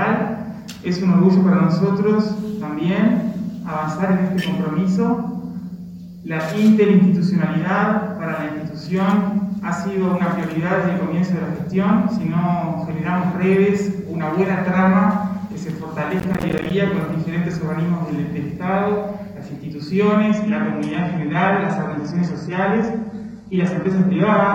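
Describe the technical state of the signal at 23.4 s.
At 23.4 s the audio is inside a stretch of adaptive stream at a lower bitrate, running from 20.32 s to the end. The quality steps down abruptly with no gap, as the player switches to a cheaper encoding when the connection slows. The treble thins, which fits a fall from roughly 96 kbit/s AAC to 16 kbit/s HE-AAC. On a spectrogram the content above 11.7 kHz vanishes at a hard ceiling, while the waveform continues unbroken.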